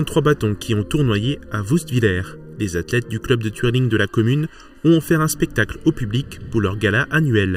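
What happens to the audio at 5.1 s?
Channel delay (comb filtering) is present at 5.1 s, as it is throughout the clip. One channel lags the other by under a millisecond, and summing them to mono cancels shared content at evenly spaced notches starting around 700 Hz, leaving the sound hollow and phasey.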